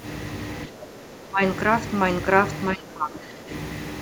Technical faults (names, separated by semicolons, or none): speech suppressed in double talk